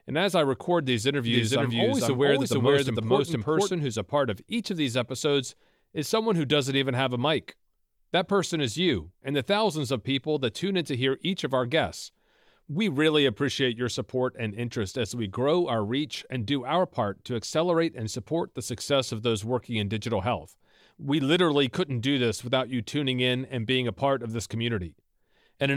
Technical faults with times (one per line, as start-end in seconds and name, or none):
1.27-3.71 doubled audio track